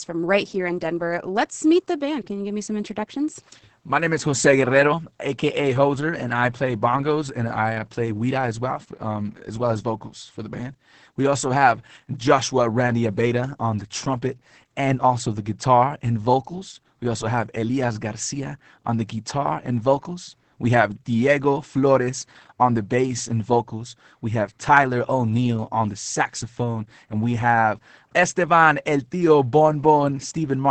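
Opus voice compression runs through the whole clip: the linear-prediction coder keeps the band below 8 kHz and quantises the excitation very coarsely, consistent with roughly 10 kbps, so the speech sounds muffled, hoarse and faintly robotic, with heavy coding damage.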